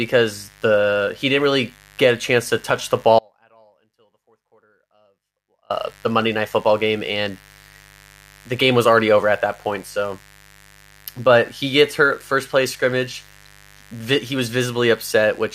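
A speech clip carrying mains buzz throughout, a raspy 50 Hz buzz about 30 dB below the speech, harsher than plain hum because of its upper harmonics. From 3.19 to 5.70 s an audio dropout to a faint residue cuts the sound abruptly for 2.51 s, leaving a faint remnant about 35 dB down, likely a broken link with the downstream path still live, not a pause or fade.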